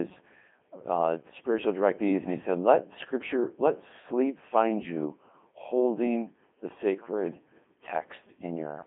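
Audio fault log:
throughout, Codec 2 vocoder: the speech sounds robotic and buzzy, heavily degraded, with nothing above 3.4 kHz and a band of roughly 200 Hz to 3.4 kHz. The decoder rebuilds the voice from sine waves using only pitch, voicing, energy and envelope, at a rate that fits 2.4 kbit/s.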